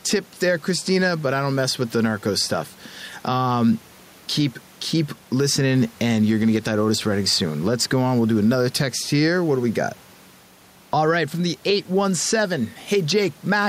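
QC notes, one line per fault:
Throughout, gain pumping: the room noise sits about 32 dB below the speech, and the gain is pulled down by around 5 dB under each loud syllable, so loud and soft passages sound squashed. Likely cause is microphone gain set far too high, with a fast limiter pulling down every peak.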